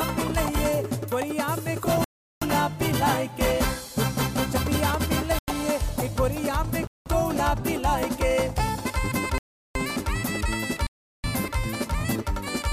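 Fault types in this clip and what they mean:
Block of digital silence: The sound cuts to silence for a whole block, then returns with no fade. It happens five times, at 2.04, 5.39, 6.87, 9.38 and 10.87 s. Three gaps last 0.37 s and are heard as holes. The gap at 6.87 s lasts 0.19 s. The one at 5.39 s lasts 0.09 s and is closer to a pop. The lengths double step by step, which fits whole buffers of 4096, 8192 and 16384 samples going missing.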